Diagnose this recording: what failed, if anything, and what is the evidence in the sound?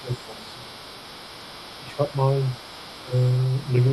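A second voice sits under the talker for the whole recording, from 0.0 s to the end. It is faint, about 20 dB below the main speech. This is the other side's voice leaking through. The stage is call processing. The likely cause is an echo canceller that left residual loudspeaker echo in the microphone signal. The far-end sound reached the microphone acoustically, and the canceller's estimate did not fully remove it.

The talker's own voice also dips in three places: 0.02 to 0.67 s, 1.81 to 2.13 s, and 3.04 to 3.13 s. The first two drops reach around 10 dB. The last is deeper, around 15 dB. This is speech suppressed in double talk, again at the call-processing stage. Both sides were talking together. The likely cause is the echo suppressor mistaking near-end speech for echo and attenuating everything.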